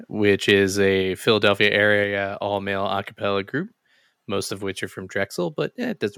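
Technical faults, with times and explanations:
0.48–0.51 s and 1.63–1.66 s, microphone overload: the loudest peaks crackle harshly, likely because the input level ran about 2 dB past the converter's ceiling. A small share of samples were cut flat, shown as squared-off peaks on the waveform and brief broadband smears on the spectrogram.
1.02 s and 2.04 s, microphone volume stepped down: the speech and background both drop about 3 dB at once, each time shortly after a harsh peak, likely because the call software cut the input gain. The second step comes just before "all male a cappella". On the waveform the envelope steps down abruptly, and on the spectrogram every frequency dims evenly at the same instant.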